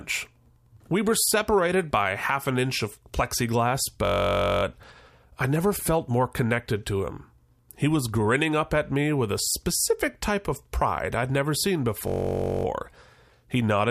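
Speech, interrupted twice by a system hang loop: from 4.05 to 4.63 s and from 12.08 to 12.65 s, a 21.33 ms slice (fitting a 1024-sample buffer) repeats as a steady 46.9 Hz buzz, showing as identical repeating waveform cycles and evenly spaced harmonic stripes on a spectrogram.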